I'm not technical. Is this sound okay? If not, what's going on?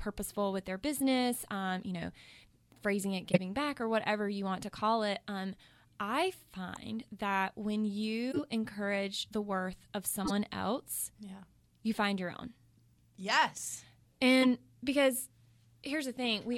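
No, not quite. There are five short glitches called corrupt frame decoded: at 3.32 to 3.38 s (between "phrasing it" and "back or whatever you"), at 6.76 s, at 8.31 to 8.41 s (after "that when"), at 10.25 to 10.32 s (after "encourage the worth of"), and at 14.41 to 14.47 s. Each is a quick chirp or burst of noise. Part of the compressed speech got scrambled, and the player played it anyway. The one at 3.32 s is the loudest.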